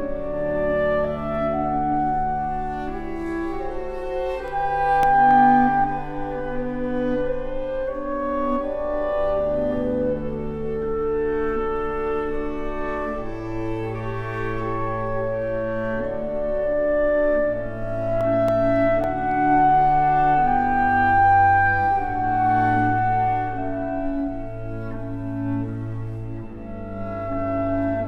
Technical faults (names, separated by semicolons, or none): CD scratch ticks